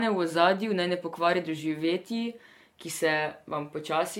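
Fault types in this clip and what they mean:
Generation loss: throughout the speech, a swirly, hollow smear with blurred consonant attacks and nothing above 17 kHz, worse than its bandwidth suggests. This is likely from about seven rounds of lossy re-encoding, each requantising on a shifted frame grid, consistent with AAC-LC near 96 kbit/s.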